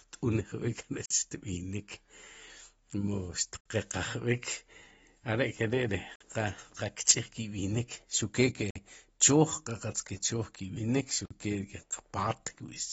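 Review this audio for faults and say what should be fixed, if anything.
Throughout the speech nothing is heard above 7.7 kHz, and the codec damage is plainly audible: dull, smeared consonants with a warbling, fizzy texture on sibilants. This is likely AAC compression (AAC-LC) at a bitrate in the region of 28 kbps, where the encoder lowers its cut-off and starves the hearing-model quantiser of bits. Unlike a simple low-pass filter, it adds texture artefacts as well as removing top end. Encode at a higher bitrate, or keep a lossless master.

A gap between chunks interrupts the audio four times, each lasting 50 ms: 1.06 to 1.11 s, 6.16 to 6.21 s, 8.71 to 8.76 s and 11.26 to 11.31 s. The joins fall on a grid of about 2.55 s, which fits 2.5 s chunks with silence inserted at each boundary. No sound is lost, so it differs from a dropout, where content vanishes at irregular moments. Concatenate chunks without padding or scheduling delay.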